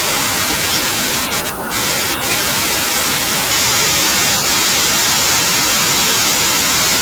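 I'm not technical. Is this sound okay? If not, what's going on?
Yes, this sound is okay, and nothing is going wrong with it.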